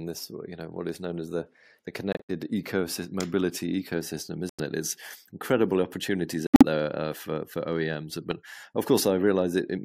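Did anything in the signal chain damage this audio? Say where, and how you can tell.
Yes. Corrupt frame muted, at 2.12 to 2.30 s (after "known as the the", before "ecosystem mobility ecosystem"), 4.49 to 4.60 s (after "ecosystem mobility ecosystem") and 6.47 to 6.63 s (after "incredible opportunities", before "there uh for for"). This is codec-stage damage. Each gap cuts in abruptly and spans several frame lengths, with no time lost. Flipped bits in the compressed stream made the decoder reject those frames, and the player put silence in their place.

Corrupt frame decoded, at 8.30 s. This is a brief error, around -15 dBFS, and it comes from the same codec stage. Here the damaged frames passed the decoder's checks, so misread gains and codes were played as though valid. That put energy at the wrong frequencies for about the length of each of roughly seven damaged frames, which is heard as a short sound that doesn't belong to the surrounding sound.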